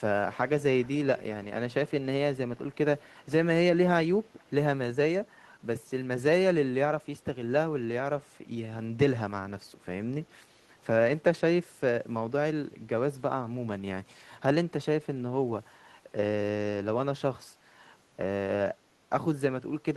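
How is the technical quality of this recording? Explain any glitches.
There are three short glitches in this speech recording. Echo leak appears at 0.83 to 0.97 s, 1.18 to 1.46 s and 3.06 to 3.26 s: a faint, delayed copy of the speech trails the original by about 350 ms, quietest in the last instance and a little stronger in the second. The likely cause is a far end on loudspeaker whose echo canceller let part of the returning sound slip through and sent it back.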